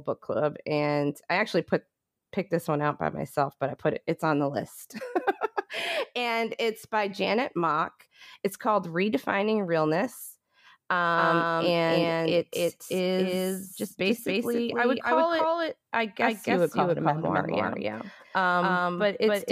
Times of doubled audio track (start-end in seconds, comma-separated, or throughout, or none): 11.17-19.52